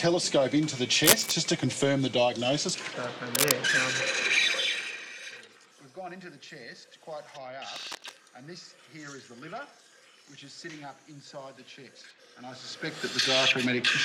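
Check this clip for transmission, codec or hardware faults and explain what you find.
One hardware fault is present: cable scratch noise, in three bursts at 1.04–1.32 s, 3.35–3.57 s and 7.69–8.18 s. Each sounds like rustling laid over the audio, the first about 5 dB above the signal, the later two at roughly signal level. The likely cause is a worn cable, connector or control being moved, so its contact resistance fluctuates rapidly and injects dense, irregular noise.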